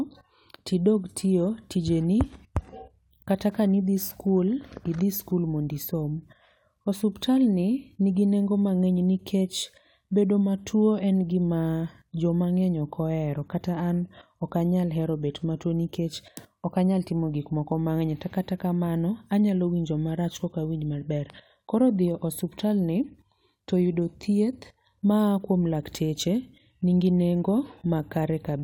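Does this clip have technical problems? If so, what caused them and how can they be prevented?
No, there are no technical faults to be heard in this speech clip. Since nothing has gone wrong, there is nothing here that needs preventing.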